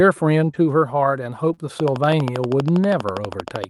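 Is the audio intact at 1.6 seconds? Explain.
No. Short concealed packet loss runs from 1.53 to 1.59 s, ending just before 1.6 s. About 40 ms of the speech never reached the decoder in time, so the receiver covered roughly 38 ms of that gap by extending the sound that came before it, then faded back into the real signal. At 1.6 s the audio is just emerging from that patch, which is heard as a brief smear or wobble.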